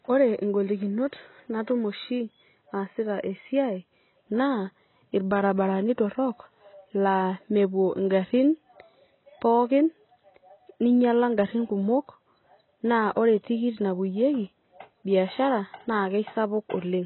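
From start to finish the speech sounds dull and smeared, with nothing above 4 kHz, most likely heavy AAC compression at a very low bitrate, around 16 kbps.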